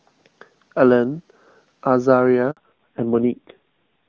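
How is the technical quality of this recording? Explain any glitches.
The first part of the call carries clear HD Voice speech, but two related glitches hit around 2.5 seconds.

At 2.51 s there's a handover gap: the call switched networks, no speech frames arrived, and the voice drops to silence for about 60 ms.

From 2.57 s to the end it's a fallback to narrowband. Everything above 4 kHz is gone, so the speech turns duller and rougher, consistent with a low-rate AMR-NB mode around 5.9 kbit/s.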